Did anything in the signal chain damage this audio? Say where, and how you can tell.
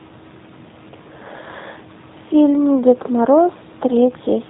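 Yes, at the codec stage: throughout, a G.729 codec cuts everything above 4 kHz and rebuilds the speech from a filter and pulses, giving rough, synthetic speech. The room noise, about 29 dB down, warbles, unlike a plain low-pass, and fits 8 kbit/s.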